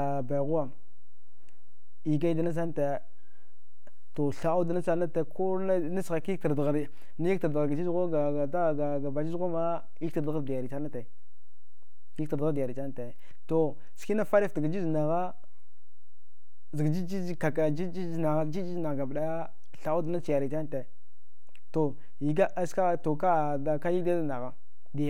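Somewhere in the capture or conversion chain a constant voltage has been added to the signal, so this speech recording carries a DC offset of about -29 dBFS for its whole length. The waveform sits shifted away from the zero line from start to finish. The offset itself is inaudible, but it shows up as a steady component at 0 Hz and eats into headroom. Peaks on one side have less room before clipping than they should.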